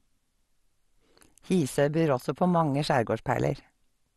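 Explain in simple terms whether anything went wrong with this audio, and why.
Throughout the speech, the sound is dull and gurgly, with nothing above 12 kHz. That is likely MP2 compression, which switched off the top bands and coarsened the rest.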